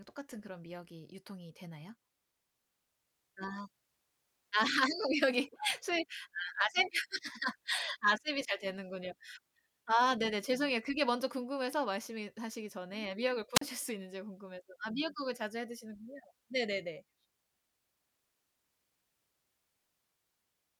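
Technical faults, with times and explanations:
13.54 to 13.61 s, wireless microphone squelch dropout: static briefly swells as the FM radio link fades, then the receiver's squelch mutes the speech for about 40 ms. That hiss before the near-silent hole is what separates it from a clean digital packet dropout.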